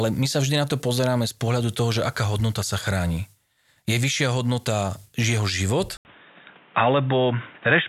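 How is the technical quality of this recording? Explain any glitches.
The recording has one glitch, near the end. At 5.97 s, right after "vyššia hodnota jeho", an 80 ms silence is followed by an abrupt change of character: the input was likely switched to a poorer device. From there to the end, nothing above 3.8 kHz comes through, so the speech turns dull and boxy. A new background noise sits roughly 30 dB below the speech, and the overall level stays about the same.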